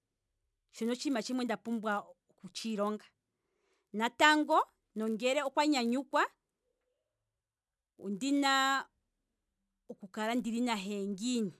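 From start to end, a resampler restarted on every block spoils the speech. Each 10 ms block was converted alone, which fits a change from 48 kHz to 24 kHz. Every block edge carries a small error. These merge into a 100 Hz buzz under the speech.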